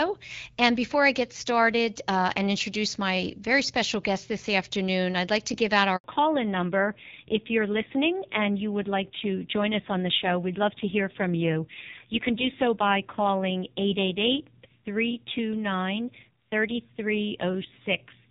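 At 5.96 s, just after "like to give out", the audio drops out completely. This is a handover gap. The call was passed from one network link to another, and no speech frames got through during the switch. The sound fades within a few tens of milliseconds and stays silent for about 80 ms, until 6.04 s. Whatever was said in that window is gone, not muffled.

From 6.04 s to the end, there is a fallback to narrowband. Before the gap, the HD Voice path carries only light codec colouring, consistent with AMR-WB at around 12.65 kbit/s. After it, nothing above 4 kHz remains. The crisp top end of the sibilants disappears. The speech turns dull and boxy, with a rough, grainy edge. That points to the call being renegotiated onto a low-rate narrowband codec, fitting AMR-NB at about 5.9 kbit/s.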